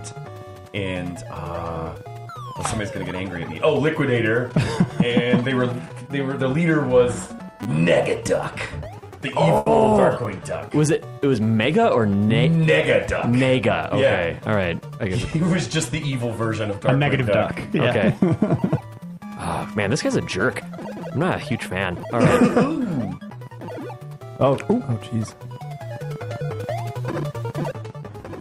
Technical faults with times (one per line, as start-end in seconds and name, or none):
7.63-7.66 repeated buffer
9.57-9.68 short stall from a late packet
10.25 repeated buffer
26.55-27.01 jitter buffer speed-up